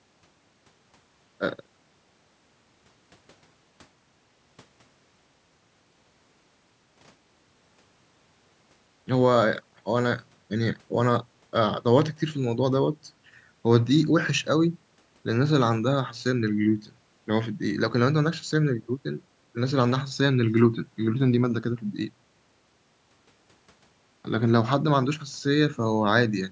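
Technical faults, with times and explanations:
No technical faults can be heard in this speech.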